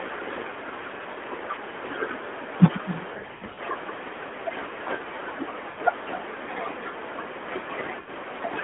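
From start to finish the speech carries an echo with no canceller. The far end is evidently playing the call over a loudspeaker and its microphone is picking it up, with nothing removing it. Every phrase returns roughly a third of a second later as a fainter, thinner shadow, sitting about 15 dB below the direct speech.

Lost AMR speech frames appear three times. From 3.14 to 3.60 s about 300 ms of audio drops out in pieces spread over 440 ms, and the longest unbroken gap is 80 ms. The narrowband decoder fills each hole by repeating its last good pitch and vocal tract settings at falling gain, so the voice warbles and smears, dipping briefly before recovering in a rough, weak state. At 5.70 to 5.79 s and again at 8.00 to 8.10 s, single 80 ms gaps, which fit a run of four 20 ms frames, produce short drawn-out dips of the same kind. Within the 200 Hz to 3.5 kHz line band, the codec itself does only light damage.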